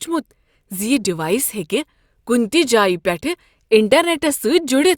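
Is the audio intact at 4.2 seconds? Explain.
Yes, the audio is intact at 4.2 seconds, without any audible fault.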